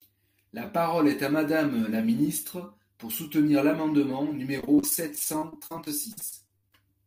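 It's a speech clip, and right after "ministre pour soutenir l’amendement" it falls into repeated packet loss (robotic sound) from 4.58 to 6.75 s. Packets keep going missing or arriving late, roughly two dozen short holes adding up to about half a second, the longest around 60 ms. Each hole gets patched by stretching the last bit of sound, so about a quarter of that stretch is filler, and it comes out choppy with pieces missing.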